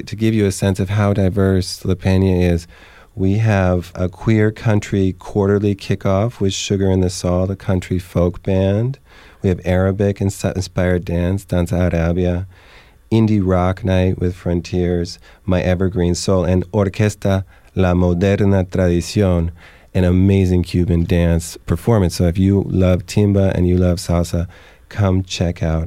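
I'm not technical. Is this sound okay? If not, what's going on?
Yes, nothing in this recording stood out as a problem when I listened to it.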